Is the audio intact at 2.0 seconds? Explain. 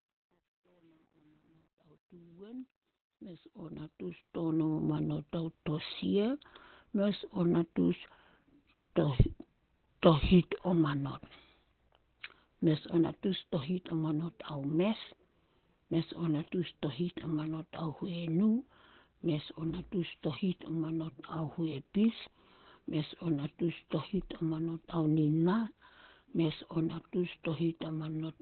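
No. The fade-in running from 0.0 to 4.93 s passes through a volume stage that keeps too few bits and adds no dither, consistent with roughly 10-bit resolution. As the level sits near the smallest step, the waveform collapses into coarse square steps. At 2.0 s this truncation distortion on the fade is at its worst (0.0 to 3.77 s), so the quiet sound turns gritty. The clip also likely went through Opus compression at a very low rate, around 12 kbps, in its narrowband speech mode. That removes everything above about 4.3 kHz, so the audio at this moment also sounds muffled, hoarse and heavily degraded.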